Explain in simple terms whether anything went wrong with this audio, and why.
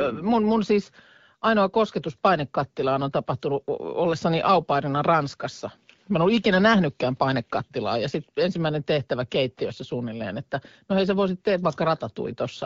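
Nothing went wrong here: it's just ordinary speech carried over an HD Voice (AMR wideband) phone connection, doing its job the way it's meant to.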